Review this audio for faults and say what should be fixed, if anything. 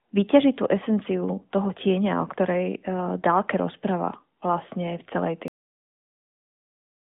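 The last buffers were never written, producing a cut-off end: at 5.48 s the speech, heard through the AMR narrowband mobile codec's band below about 3.8 kHz, breaks off mid-sound and drops straight to digital silence with no decay, which fills the final 1.65 s. Flushing and closing the recorder only after the final buffer has been committed would prevent it.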